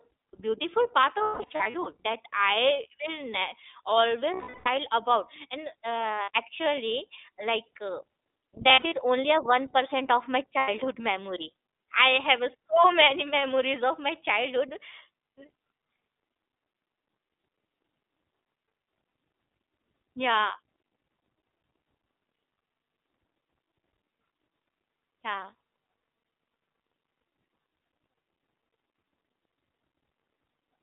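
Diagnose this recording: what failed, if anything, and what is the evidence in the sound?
Throughout, the speech is thin, bandlimited to roughly 300 Hz to 3.6 kHz, and plainly rough and synthetic. This is the iLBC codec at the codec stage: it codes each frame's excitation on its own, which fits the 15.2 kbps, 20 ms frame mode, and as a narrowband codec it passes nothing above 4 kHz.

Network-stage lost iLBC frames cause held, buzzy vowel-like smears at 1.18–1.88 s (gaps scattered, the longest about a fifth of a second), 4.34–4.68 s, 6.14–6.36 s, 8.68–8.94 s, 10.58–10.69 s and 19.08–19.12 s. The decoder repeats the last pitch cycle with noise, and each frame stands alone, so speech recovers immediately.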